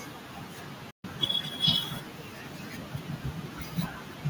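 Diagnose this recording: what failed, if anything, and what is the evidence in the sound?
A digital broadcast dropout at the reception stage: the speech fades to silence over about 8 ms at 0.90 s and returns at 1.05 s. The receiver muted after frames were lost or failed checks, and the 128 ms hole fits a few consecutive frames, now unrecoverable.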